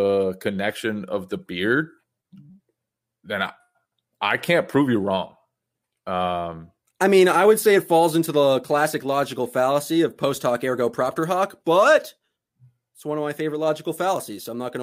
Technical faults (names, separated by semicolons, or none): none